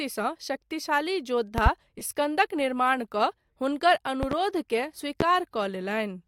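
Speech recording with loud pops at 1.58–1.69 s and 4.23–4.35 s (each a double pop) and a single one at 5.21–5.24 s, peaking well above the speech, likely voltage glitches from a switch or connector. At 1.98–2.01 s, lost LE Audio frames leave a brief noisy smear over about 22.5 ms, consistent with roughly three dropped LC3 frames.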